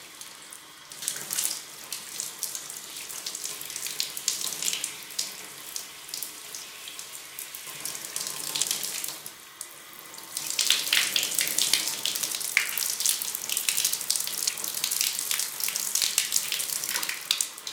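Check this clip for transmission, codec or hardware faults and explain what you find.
Eight abrupt jumps, most likely dropped buffers (overrun), occur at 0.37, 1.02, 2.14, 8.64, 12.73, 14.49, 15.42 and 16.44 s. Audio wasn't collected before being overwritten, so the sound skips ahead, losing about a third of a second at 0.37, 2.14, 12.73 and 16.44 s and about a tenth elsewhere.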